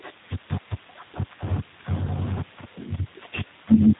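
G.729 codec damage runs from start to finish of the speech, and the character of it fits the G.729A variant at 8 kbit/s. Rather than storing the waveform, the codec rebuilds each short frame from a vocal tract filter, a pitch predictor and a few pulses, so voiced sounds come out plainly rough and slightly synthetic. Nothing above about 3.8 kHz survives, leaving the sound muffled and lacking crisp sibilance.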